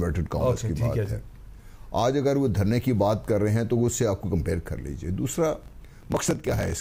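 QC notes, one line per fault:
5.56–6.81 s: block size mismatch (truncated). The end of each block is discarded, which fits a 1024-sample read size. This causes a 43.1 Hz buzz and 1.12x faster playback at near-normal pitch. The waveform shows regular seams, and the spectrogram shows vertical striping at 43.1 Hz intervals.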